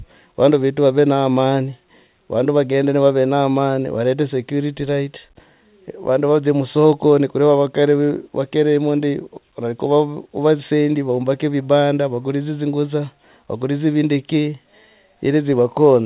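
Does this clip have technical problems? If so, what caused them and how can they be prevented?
No, there are no technical problems in this speech.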